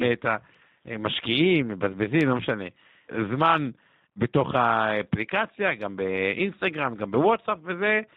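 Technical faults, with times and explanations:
Throughout, G.729 codec: speech stops above 4 kHz and sounds plainly rough and synthetic, rebuilt from a filter plus sparse pulses, which fits 8 kbit/s.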